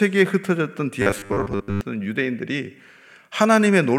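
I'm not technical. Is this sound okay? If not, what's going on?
No. From 1.02 to 1.81 s the speech turns into a stiff metallic buzz. This is robotic sound from repeated short buffers, likely from a tiny 10 ms slice being replayed while late audio was skipped.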